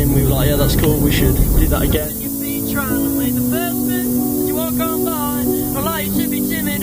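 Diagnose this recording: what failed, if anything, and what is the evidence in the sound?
Low bit depth with noise shaping runs through the whole clip, from start to finish, and points to the sample-format conversion stage. The evidence is a steady, thin hiss that climbs sharply toward the top of the band and sits nearly as loud as the sound itself. The audio has been requantised to about 5 bits, and the rounding error was fed back and pushed upward in frequency, so the distortion becomes bright, constant noise rather than gritty distortion.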